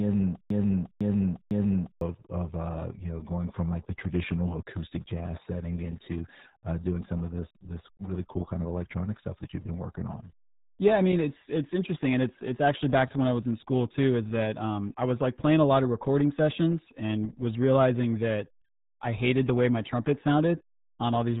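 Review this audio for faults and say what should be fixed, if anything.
From 0.00 to 2.01 s a half-second fragment of speech repeats exactly, already looping when the clip starts: a broken-record loop, likely a stalled stream resending its last buffer. Prevent it by restarting playback cleanly when a stall is detected.

Throughout, the speech is muffled and gargly with nothing above 3.8 kHz. That is RealAudio 14.4 codec damage, consistent with an 8 kbit/s dial-up stream. Prevent it by recording or sourcing at a modern, higher-bitrate codec.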